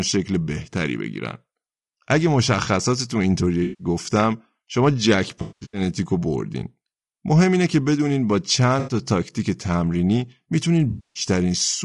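Low-delay AAC compression runs throughout. The speech sounds rough and grainy, with noise between the pitch harmonics and a thin, synthetic top band, likely from AAC-ELD's short frames at a low bitrate of about 32 kbps.

AAC frame loss with concealment follows at 3.63–3.87 s (160 ms), 5.41–5.81 s (300 ms in scattered gaps, the longest around 200 ms), 8.79–8.93 s (80 ms) and 10.89–11.23 s (260 ms). Each time the decoder rebuilt the missing frames from the last good spectrum, leaving smeared, noisy or phasey patches.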